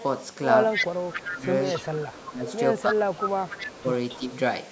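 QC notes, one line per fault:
0.71–1.25 s, 1.65–2.58 s, 3.14–4.36 s, echo leak: a delayed copy of the speech trails 276 ms behind, near full level at first, then fainter. The spectrogram shows duplicated harmonic patterns offset in time, likely from uncancelled loudspeaker pickup.
1.11–1.47 s, 1.90–2.48 s, 2.82–3.84 s, 4.19–4.23 s, speech suppressed in double talk: the level dips by up to about 15 dB while both sides talk at once. The waveform envelope shrinks and the spectrogram fades in patches, likely from the canceller ducking both signals.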